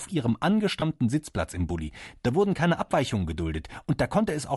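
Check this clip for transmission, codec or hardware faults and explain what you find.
Two faults are present in the speech: a coarse coding texture across the whole recording and one brief dropout near the start.

Bluetooth LC3 compression is heard throughout as a clearly audible grainy, breathy edge on the upper frequencies, with a hiss-like fill where fine high-frequency detail should be. The likely cause is LC3 coding at a moderate rate, around 48 kbps, where the encoder discards much of the top spectrum and replaces it with shaped noise. Unlike MP3-style swirling or metallic warble, this texture is noisy and grainy rather than tonal.

Lost LE Audio frames occur from 0.80 to 0.82 s, a 20 ms gap that fits two missing 10 ms frames. The decoder conceals the gap by repeating the last good spectrum with scrambled phase, so the speech briefly turns into a noisy smear instead of dropping to silence. 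That concealment smear distinguishes it from a plain dropout or a buffer click. A hard cut would sound abrupt, and a click would be a sharp transient.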